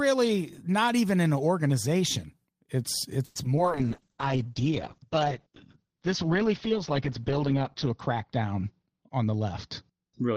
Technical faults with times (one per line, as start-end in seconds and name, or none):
3.25-3.37 call audio freeze
3.43-3.59 short concealed packet loss
3.64-10.36 call bitrate drop
9.09-9.41 jitter buffer speed-up
9.91-10.36 jitter buffer speed-up